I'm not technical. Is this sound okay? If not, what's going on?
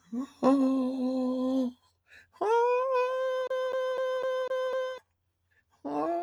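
No. Sound cut by the noise suppressor, 1.75 to 2.36 s: a cleanup filter mistook parts of the music for noise and turned them down, about a fifth of a second in total.

CD stuck on one turn, 3.47 to 4.98 s: a scratch keeps throwing the player back, so the same quarter-second of music repeats six times, with tiny gaps between.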